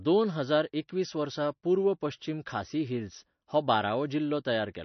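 Throughout the speech the audio has likely been through heavy MP3 compression, with the encoder short of bits, which fits a low bitrate around 32 kbps. To save bits it has discarded everything above 6.1 kHz, so the top end is missing and s sounds lose their crispness. Weak frequency lines switching on and off between frames give a watery, swirling texture with metallic chirps on sibilants, and consonant attacks sound smeared.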